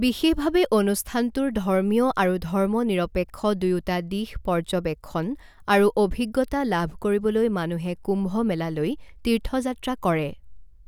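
No technical faults can be heard anywhere in this speech recording, so there is nothing to describe in time order.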